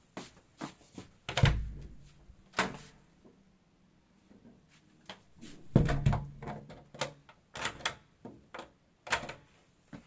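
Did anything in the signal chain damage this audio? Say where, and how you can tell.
No, nothing in the chain damaged these sounds, and the lack of anything above 8 kHz is just the normal ceiling of a wideband call path, which fits G.722 at 64 kbps.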